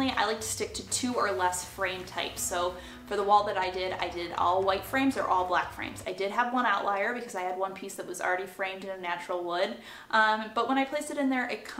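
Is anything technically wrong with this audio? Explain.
No, no technical faults.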